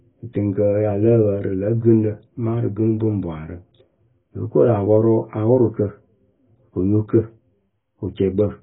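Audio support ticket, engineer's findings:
Speech dull and band-limited throughout, nothing above 3.6 kHz; sibilants fizzy, vowels warbling. Likely AAC compression, heavy damage consistent with roughly 16 kbps AAC-LC. A plain low-pass would not cause the swirling texture or the holes in the spectrum.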